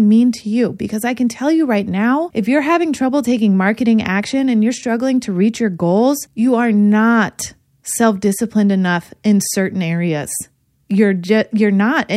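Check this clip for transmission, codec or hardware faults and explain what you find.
No transmission, codec or hardware faults can be heard anywhere in the recording; the speech signal arrives intact, with nothing in it that points to a problem in the chain that carried or encoded it.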